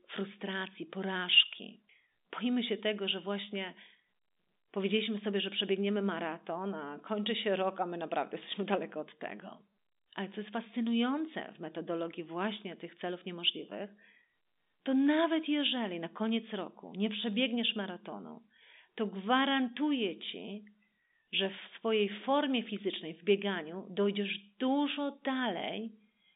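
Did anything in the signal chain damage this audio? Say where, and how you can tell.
No, nothing in the chain damaged this speech.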